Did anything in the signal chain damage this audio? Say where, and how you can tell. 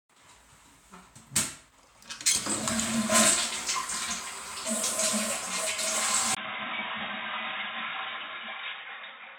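Yes. From 6.35 s to the end, after a 20 ms gap, the sound turns dull: nothing above 3.8 kHz, level down roughly 10 dB, with a new noise floor around 55 dB below. This is likely an input switched to a poorer device at the driver stage.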